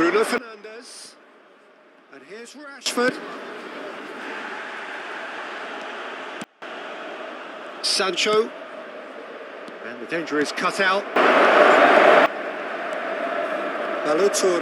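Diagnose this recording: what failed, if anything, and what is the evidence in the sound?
A digital gain stage, likely applied without a ramp, causes sudden gain jumps: sound and noise floor step down about 19 dB at 0.38–2.86 s and about 24 dB at 6.44–6.62 s, then up about 16 dB at 11.16–12.26 s.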